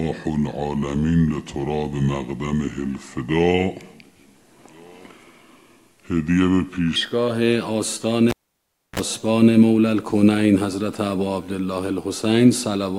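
From 0 to 6.96 s, a section at the wrong speed plays at 0.757 times normal. Pitch sits about five semitones low, likely from a clock mismatch.

At 8.30 s the cable is pulled and plugged in. A pop, 0.64 s of near silence, a 35 ms burst of 60 Hz buzz, then another pop at 8.99 s.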